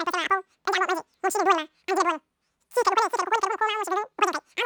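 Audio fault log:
throughout, wrong sample rate: the speech races by at roughly 2.76 times its natural pace, squeaky and chipmunk-like, with pitch raised by about 17.6 semitones, nearly an octave and a half. Speed and pitch rise together by the same ratio, the signature of samples played back faster than they were captured with no rate conversion. The 2.76 factor fits speech recorded at 16 kHz and played back at 44.1 kHz.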